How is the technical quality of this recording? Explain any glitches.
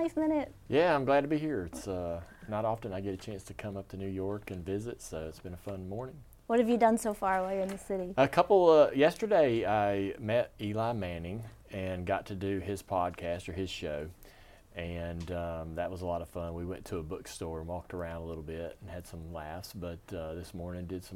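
The recording has one recurring fault, a clock drift buffer slip, heard as a regular tick in the audio from about 1.83 s to 20.04 s. The ticks repeat every 2.6 s, roughly seven in all. They are likely caused by two devices running on separate clocks that disagree by something around 70 ppm. The buffer between them slowly drifts until it drops or repeats a handful of samples, and each correction produces a small discontinuity in the waveform, heard as a click.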